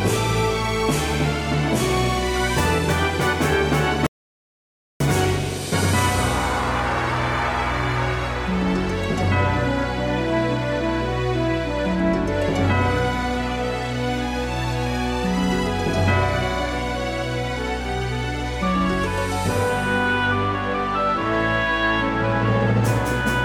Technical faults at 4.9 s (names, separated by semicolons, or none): audio dropout to silence